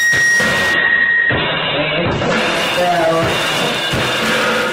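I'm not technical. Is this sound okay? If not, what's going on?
No. At 0.74 s a call bitrate drop starts: the connection gave the audio far less data, so it turns rough and muffled until the end.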